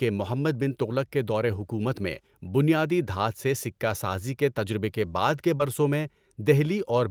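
At about 5.57 s, right after "تجربے کے بعد کے", the speech has a short concealed packet loss: roughly 20 ms of audio never arrived in time, and the receiver covered the gap by stretching the preceding sound forward for about 21 ms before handing back to real signal. This is heard as a brief smear or wobble rather than silence. Unlike a dropout, nothing goes quiet. Unlike a rebuilt packet, what fills the hole is a guess carried over from the last sound.

Overlapping the end of it, from 5.60 to 5.62 s, comes a lost packet rebuilt from error correction. One 20 ms packet went missing, but the following packet carried a low-bitrate copy of it, which the decoder played in its place. That stretch therefore keeps the actual speech content but sounds rougher and noisier. This separates it from the concealment around it, which continued the earlier sound instead of restoring what was really said.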